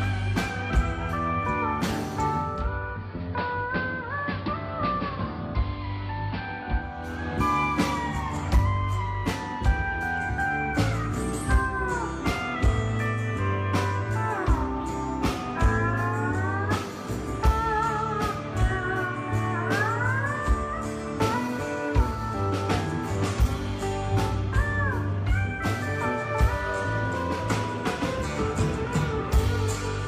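Digital radio blending to analogue from 2.37 to 7.16 s: the receiver loses the digital stream and cross-fades over about 371 ms to the AM broadcast, so the audio drops about 4 dB and gains a faint hiss, then blends back.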